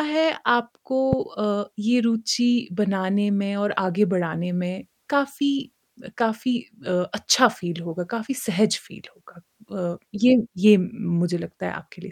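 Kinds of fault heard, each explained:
Loud pop: one sharp pop from 1.13 to 1.15 s, roughly 15 dB above the speech, which continues underneath. It is likely a brief voltage spike added to the signal.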